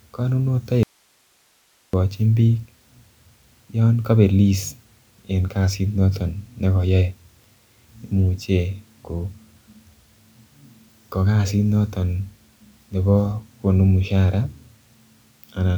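An audio dropout to a faint residue runs from 0.83 s to 1.93 s, cutting the speech abruptly for about 1.1 s. Nothing fades; the signal simply vanishes and then snaps back mid-flow. The gap is not silent but holds a low hiss, roughly 40 dB below the speech. The likely cause is the wanted signal being lost upstream while the path after the break stayed live, passing only its own noise.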